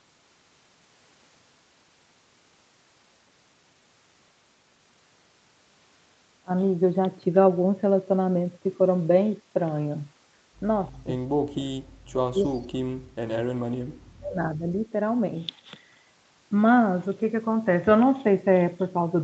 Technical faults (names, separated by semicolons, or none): speech suppressed in double talk; echo leak